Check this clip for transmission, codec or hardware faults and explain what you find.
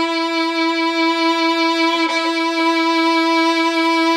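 I found no faults to report in this clip.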